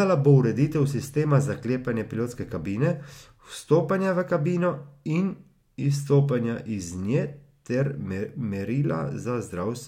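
Speech, with no audible faults.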